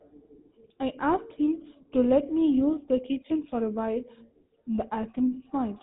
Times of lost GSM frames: 5.27-5.35

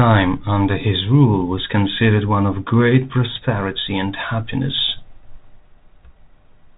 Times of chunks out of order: none

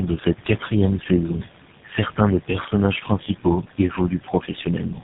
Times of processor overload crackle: none

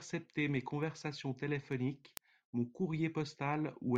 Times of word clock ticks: 0.38-3.96

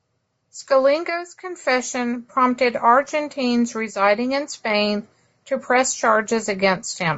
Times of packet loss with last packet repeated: none

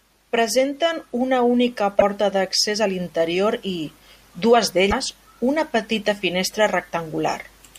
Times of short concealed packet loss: none

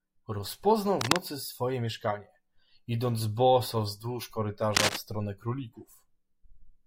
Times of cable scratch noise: 1.01-1.16, 4.74-4.97

